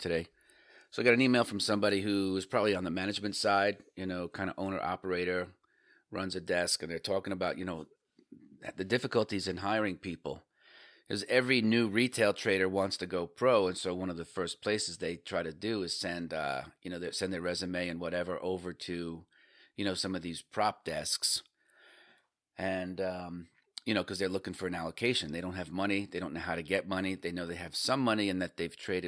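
No technical faults occur anywhere in the recording, so there are none to describe in time order.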